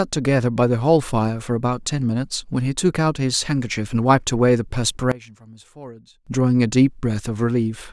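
From 5.12 to 6.27 s the speech falls about 20 dB, likely from one channel inverted, so centred content cancels when summed to mono.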